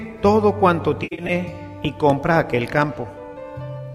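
From 1.03 to 1.32 s comes AAC frame loss with concealment: about 149 ms of coded audio drops out in patches spread over 256 ms, the longest gap roughly a tenth of a second. The decoder patches each hole from the last good spectrum, so the sound itself turns smeared and noisy rather than gaining anything on top.

Loud pops follow, likely from an electrical transient such as a switch, plug or static discharge. Two sharp pops fall between 1.85 and 2.12 s, peaking roughly 10 dB above the signal, then a single one at 2.82 s, roughly 5 dB up. Unlike the concealment, the sound carries on intact beneath them.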